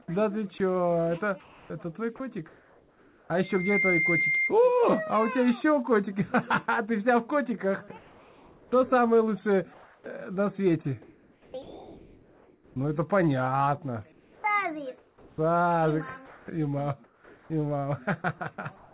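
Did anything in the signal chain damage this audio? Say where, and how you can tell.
Yes. Three stretches sound choppy: 0.02–3.3 s, 7.88–12.76 s and 14.12 s to the end. Quiet parts drop out, and a synthetic hiss replaces them for about 1.2 s, 2.7 s and 1.6 s. This is likely sound chopped by the voice detector in call processing, which substituted comfort noise.

A loudspeaker feedback squeal runs from 3.43 to 4.54 s. A single 2.1 kHz tone swells over about a third of a second until it is roughly as loud as the programme. The microphone picks up its own loudspeaker. At that frequency the loop gain exceeds one, so the tone keeps feeding itself.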